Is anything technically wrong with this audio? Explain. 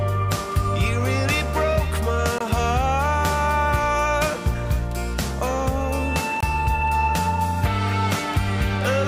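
Yes. There is a gap between chunks, heard twice: from 2.38 to 2.41 s and from 6.41 to 6.43 s. The audio appears to have been delivered in 4-second blocks, with about 21 ms of silence inserted at each join, consistent with padding or a late chunk start. The sound itself isn't lost, only pushed later, so each join is a brief hard-edged dropout recurring at a steady interval.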